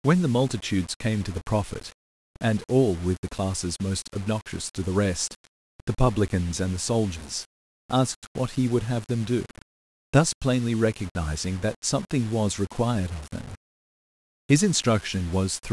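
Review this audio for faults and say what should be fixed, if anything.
The speech is grainy throughout, with distortion that tracks the signal and quiet tails dropping out or sputtering. That's likely low bit depth without dither, about 6 bits rounded, with error roughly 20 dB down. Keep it at 16 bits or more, and dither when reducing.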